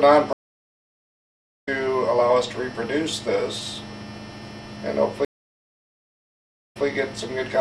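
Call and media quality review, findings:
Stream reconnect, 0.33–1.69 s: connection dropped, player restarted decoder mid-stream. Sound cuts to silence for 1.3 s, then resumes roughly a second and a half further on, skipping material.

Stream reconnect, 5.25–6.86 s: second drop and fresh decoder start. Silence of 1.45 s, then playback resumes 0.16 s earlier, so a short stretch repeats, which fits a server resending buffered data.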